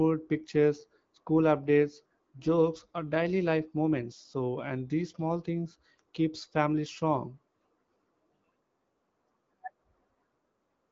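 No technical faults are present in the speech, which carries the band-limited sound of AMR wideband (HD Voice) coding at 12.65 kbit/s, with nothing above 7.5 kHz and only light codec coloration.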